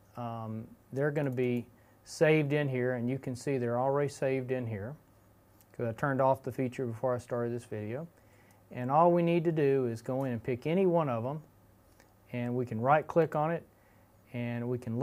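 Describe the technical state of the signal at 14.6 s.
Nothing at 14.6 s points to a technical fault; the signal is intact at that moment.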